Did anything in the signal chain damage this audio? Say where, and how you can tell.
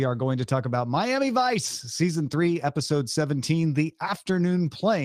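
Yes. At the network stage, a lost packet was rebuilt from error correction at 1.65 to 1.67 s in this speech. The packet never arrived, and the decoder filled the hole with the low-bitrate copy carried in the next packet. There is no dropout, just a brief stretch of rougher, noisier texture lasting about 20 ms, which fits a single lost frame. That reduced-quality stand-in is the giveaway.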